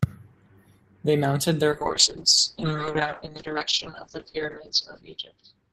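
A call bitrate drop at 1.72 s cuts the encoder from 32 to 6 kbps, narrowing the band from 20 kHz to 8 kHz, so the speech turns muffled and rough through the end.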